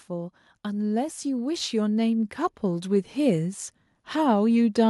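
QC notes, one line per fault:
0.07–3.61 s, automatic gain rising: the level climbs by about 7 dB over three and a half seconds. Gain control lifts voice and background together.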